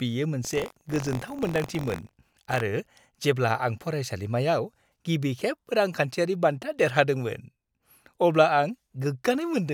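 From 0.43 to 2.62 s the speech shows buffer tearing: writer and reader cross each period, splicing in a small slice of audio about 40 ms old. The result is a steady 46.9 Hz rattle, fitting a 1024-sample buffer. Unlike random dropouts, it stays periodic and follows the signal.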